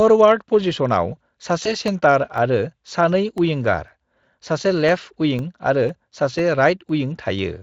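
VoIP packet loss concealed by the speech codec occurs at 1.63 to 1.71 s. One 20 ms packet went missing, and the decoder bridged it by extending its last pitch and filter at falling gain, so the speech is briefly stretched and fades, staying weak just after recovery.

Periodic USB or driver dropouts run from 1.88 to 7.39 s. Every 0.5 s, something stalls the audio path and roughly a millisecond is replaced by silence, about ten times in all, heard as evenly spaced ticks over the speech.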